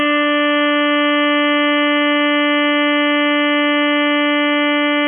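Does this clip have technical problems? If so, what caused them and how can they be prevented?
Yes, the music has heavy AAC compression damage throughout: nothing comes through above 3.4 kHz, so it sounds dull and smeared, with a warbly, fizzy edge. That's likely an AAC-LC encoder starved of bits, which fits a bitrate around 16 kbps. Encode at a much higher bitrate to avoid it.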